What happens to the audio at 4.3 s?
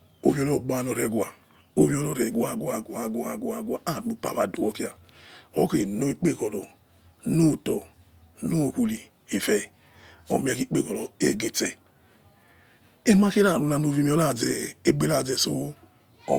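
Nothing goes wrong at 4.3 s; the speech carries on intact through that moment with no dropout, click or distortion.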